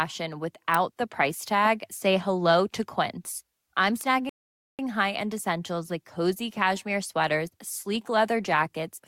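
At 0.74 s, just before "the price tag", a sharp snap sits on top of the speech. A second snap lands at 4.01 s. Each lasts only a few milliseconds. These are electrical switching spikes, likely arcs from a nearby switch or motor picked up by the audio line.

At 4.29 s the speech cuts to silence. It resumes at 4.79 s, exactly where it stopped. This is a rebuffering stall. The player ran out of downloaded audio and waited for more. Nothing is lost, but about 0.5 s of dead air is added.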